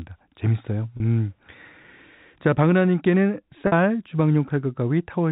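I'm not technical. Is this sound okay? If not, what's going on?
No. There is packet loss with pitch repetition at 0.97 s, lasting about 30 ms, and again at 3.67 s, lasting about 50 ms. Small pieces of the audio went missing in transit, which fits about three and then five lost packets. To cover each gap, the receiving end replayed the last tiny slice of the speech's pitch over and over while fading it down. You hear this as a brief held, slightly buzzy sound before the speech carries on.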